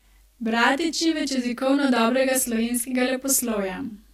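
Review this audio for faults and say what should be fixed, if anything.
A channel delay (doubling) runs through the whole speech clip. One channel arrives 40 ms late, and summing to mono leaves an equal-level slap copy behind every sound. Prevention: align channel buffers before any mono fold-down.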